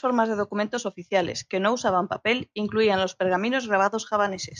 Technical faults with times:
none

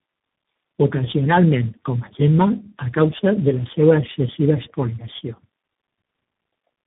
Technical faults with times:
0.00-6.87 tandem speech coding

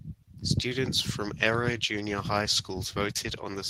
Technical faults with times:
none

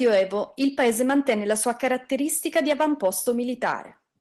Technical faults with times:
none

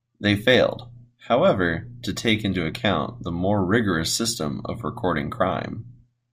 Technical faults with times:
none

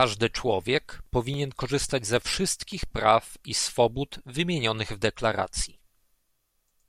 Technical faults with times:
0.51-3.27 CD scratch ticks

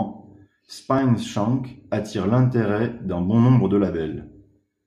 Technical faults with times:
0.98 dropped buffer (overrun)

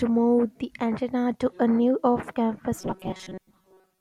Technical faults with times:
2.78-4.01 robotic sound from repeated short buffers

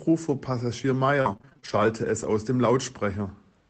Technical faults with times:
1.21-1.86 repeated packet loss (robotic sound)
2.22-2.24 lost packet rebuilt from error correction

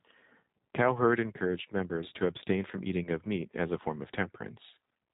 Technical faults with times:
0.00-5.14 G.729 codec

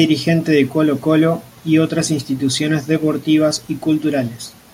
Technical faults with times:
none

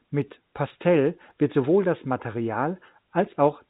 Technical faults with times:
0.22-3.61 clock slip clicks

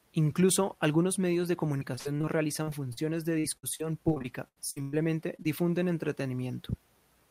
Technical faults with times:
1.77-2.25 repeated packet loss (robotic sound)
2.63-2.99 short concealed packet loss
3.39-4.94 repeated packet loss (robotic sound)
5.36-5.46 short concealed packet loss

